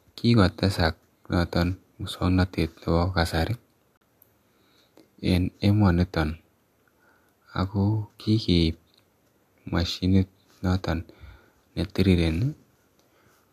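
A gap between stream segments opens at 3.97–4.01 s: mismatched timestamps at a 4-second segment boundary leave about 38 ms of hard-edged silence, though no audio is lost.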